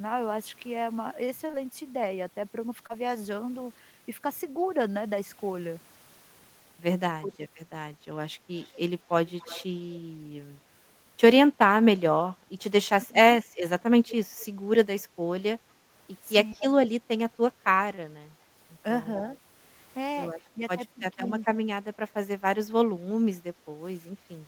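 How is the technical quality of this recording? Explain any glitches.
The recording has three kinds of call-path glitches: brief packet-loss repairs, dips when both sides talk at once, and a delayed echo.

Short concealed packet loss occurs at 1.47–1.55 s (two back-to-back gaps of about 20 ms each) and at 2.87–2.91 s. Audio arrived too late for the decoder, which extended the preceding sound to fill each hole before rejoining the real signal. The result is a short smear or wobble.

Speech suppressed in double talk appears at 7.20–7.38 s, 12.96–13.15 s, 16.35–16.64 s and 20.53–21.35 s. The level drops by about 15 to 25 dB in places. This is likely an echo canceller turning the talker down while the other side was also speaking, so the speech dips and thins.

Echo leak is heard at 8.55–8.77 s, 9.27–9.66 s, 14.08–14.46 s and 16.52–16.65 s. A copy of the speech trails by 219 ms, roughly 15 to 35 dB below the main signal. 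It is likely a loudspeaker's pickup that the far end's canceller failed to remove, sounding like scrappy repetition.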